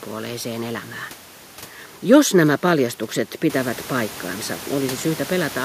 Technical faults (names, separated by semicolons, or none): none